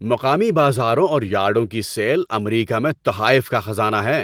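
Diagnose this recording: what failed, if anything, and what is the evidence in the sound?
Nothing in the chain has failed, and no stage of this speech recording shows a defect. Opus voice compression is doing its job: the full band is kept, with content reaching about 20.1 kHz and only light coding damage, which fits a hybrid-mode stream at around 24 kbps.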